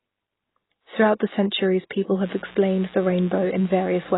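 Likely low-bitrate AAC-LC coding, which fits a rate near 16 kbps, has removed everything above 3.9 kHz across this speech clip and left it dull and smeared with heavy codec damage. At 1.9 s, pre-echo from the transform block spreading quantisation noise ahead of a sharp attack puts about 10 ms of hiss before it and softens the onset.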